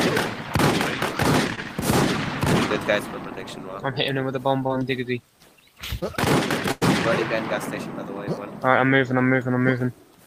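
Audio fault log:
1.55–1.59 s, 4.67–4.71 s and 5.99–6.03 s: short concealed packet loss. Each time about 20 ms of audio never arrived, and the receiver patched the hole by extending the preceding sound for roughly 20 ms before blending back. The result is a momentary smear or wobble, not an audible gap or fade.
6.71–6.83 s: burst of packet loss. Here about 100 ms dropped out in one run, five times longer than the single losses. The receiver carried the last sound forward for about 98 ms while turning it down, producing a held buzz or decaying hiss. Playback then resumes further on, with that stretch missing.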